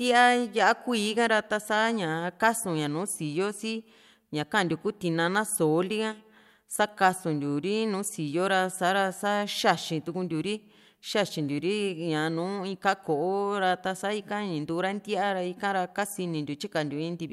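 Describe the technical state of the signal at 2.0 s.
At 2.0 s the speech signal is intact, with no technical fault present at that moment.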